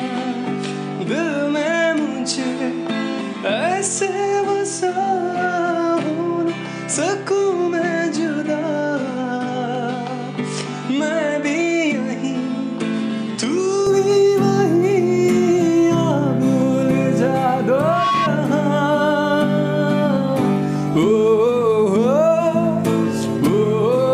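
From 0.0 to 13.87 s the sound is dull and narrow. Nothing reaches above 9.8 kHz. It is a few decibels quieter, with a faint new noise floor far below it. At 13.87 s it clears with no gap. The likely cause is an input switched to a poorer device.

From 17.76 to 18.30 s a loudspeaker feedback squeal appears. A single tone at 1.1 kHz swells over roughly 0.3 s until it is about as loud as the sound itself. The microphone is picking up its own loudspeaker, and that frequency feeds itself.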